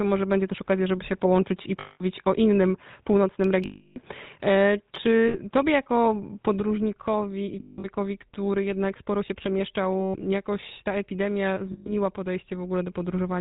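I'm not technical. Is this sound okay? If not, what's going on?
No. Three separate things are going on.

The whole recording has passed through the GSM full-rate codec, the speech compression used by early mobile phones. It rebuilds the voice from a simplified model, so the speech sounds buzzy and gravelly from start to end. Unlike the problems below, it never comes and goes.

From the start until 6.60 s, the speech is duller and more boxy, with no sound above about 3.8 kHz, a slightly different loudness, and a faint added hiss. At 6.60 s the sound clears up with no gap. That sudden change in tone points to an input switched to a poorer device, most likely a weaker microphone or a headset in call mode.

There are also lost GSM frames at 1.8 s (0.2 s long), 3.64 s (0.32 s), 5.28 s (0.06 s), 7.6 s (spread over about 0.24 s), 10.0 s (0.14 s) and 11.72 s (0.14 s). Each time, pieces of the signal failed to arrive and the last good sound was stretched to fill the gap. 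You hear a rough, metallic ring instead of plain silence, and that ring is what distinguishes it from a simple dropout.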